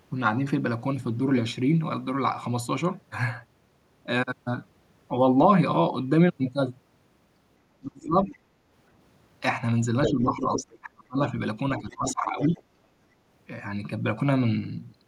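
A speech recording, and its second half runs into trouble whenever both ends talk at once. The talker's speech gets suppressed in double talk at 7.79–8.27 s, 10.05–11.33 s and 11.79–12.61 s, dipping by around 25 dB at worst (a gentler 15 dB or so in the last stretch). That's likely an echo canceller that couldn't tell the talker from loudspeaker echo and ducked everything. Alongside it, the other side's voice leaks through at 8.26–8.37 s, 10.05–10.13 s, 10.37–10.78 s and 11.77–12.61 s, running roughly 5 to 20 dB under the speech. That's likely far-end audio from the loudspeaker that the canceller didn't fully strip out of the mic.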